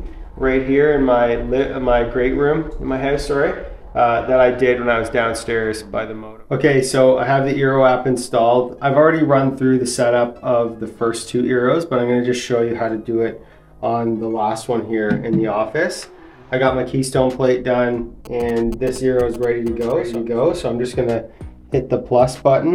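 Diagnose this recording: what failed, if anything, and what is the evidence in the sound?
GSM signalling bursts, picked up in the analogue wiring, run from 18.25 to 20.16 s as galloping ticks and 217 Hz buzzes about 20 dB below the signal. The circuit rectifies a nearby 2G phone's radio bursts. A spectrogram shows clustered vertical streaks with 217 Hz harmonic stripes. The waveform shows grouped spiky pulses.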